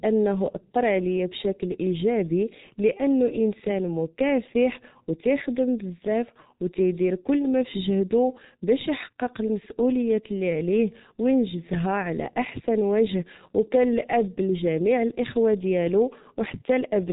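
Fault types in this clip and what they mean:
G.723.1 codec: present throughout the speech, this low-rate telephony coder rebuilds the voice from a compact model refreshed once per 30 ms frame, and the heavy damage here points to its roughly 6.3 kbit/s mode. Nothing above 3.8 kHz survives, so the speech sounds muffled and boxy, while the slowly updated model smears fast transitions, leaving consonants blurred and vowels with a rough, hoarse buzz.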